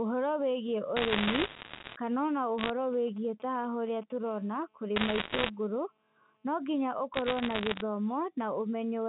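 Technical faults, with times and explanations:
0.97–1.96 s, 2.58–2.70 s, 4.96–5.50 s and 7.14–7.82 s, bit errors on a digital phone line: bits flip on the G.711 mu-law line, each corrupting one sample. Sign or high-bit hits give sharp ticks that pile into crackle over the speech. The densest run is first, with roughly 3% of bits wrong, then around 1%, 2% and under 1%.
2.93–4.12 s, GSM signalling bursts: a nearby 2G phone sends short groups of radio bursts while signalling, and the audio circuit rectifies them. The result is a galloping dit-dit-dit of brief 217 Hz buzzes, roughly 25 dB below the speech.
4.26–6.48 s, GSM phone buzz: a nearby 2G phone in a call transmits 217 bursts a second, and the audio circuitry demodulates the pulses. This gives a steady, raspy 217 Hz buzz rich in harmonics, about 36 dB under the speech and unrelated to it. Bit-error crackle overlaps it from 4.96 s.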